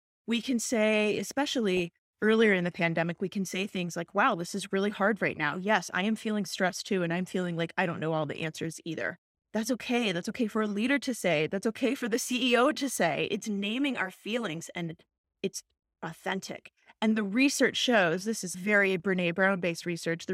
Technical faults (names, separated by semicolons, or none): DAB burbling